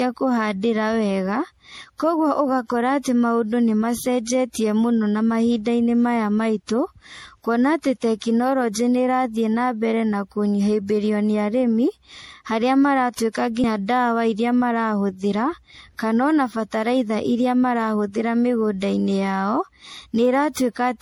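Generation loss runs through the whole speech clip. It sounds swirly, smeared and hollow, and consonant attacks blur. Energy stops near 21.1 kHz. The likely cause is repeated MP3 encoding, about seven passes at a rate that fits 64 kbit/s, each adding fresh quantisation noise.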